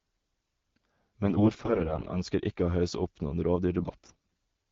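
From 1.25 to 2.17 s, just before "ønsker ikke å hausse", and again from 3.78 to 4.34 s, right after "å hausse opp noen", the speech carries AMR bit errors. Flipped low-priority bits in the wideband frames misplace the excitation pulses and skew the finer pitch, gain and spectral values. Pitch and level roughly hold, but the voice turns hoarse and gargly, harsher in the second stretch, where roughly 15 percent of bits are hit against about 10 in the first. A spectrogram shows harmonics smearing into scratchy noise while the waveform envelope stays intact.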